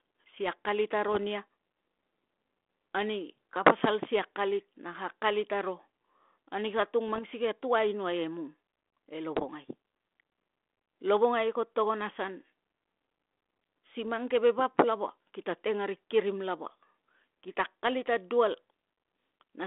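Bit errors on an ADPCM link occur at 1.08 to 1.17 s, 7.08 to 7.23 s, 9.37 to 9.44 s and 14.05 to 14.11 s, each heard as a pop trailing into a short, rough burst with a brief change in level. A small fraction of the coded bits, a few per thousand, arrive flipped. Each bad bit also knocks the decoder's step size and predictor off track, so the damage rings on for some milliseconds. The narrow telephone band, roughly 250 Hz to 3.5 kHz, comes through a 32 kbit/s G.726 link.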